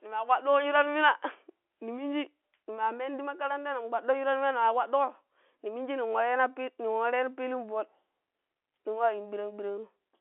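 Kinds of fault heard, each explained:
No faults found; the speech sits in a normal telephone band of 300 Hz to 3.4 kHz, with nothing above 3.8 kHz, as expected from a standard phone line.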